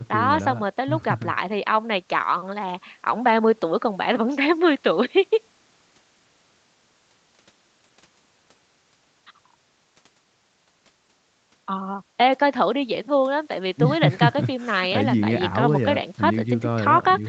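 Nothing here goes wrong: the speech has simply been through ordinary call processing and a call codec, so it tops out around 8 kHz, just as a call normally would.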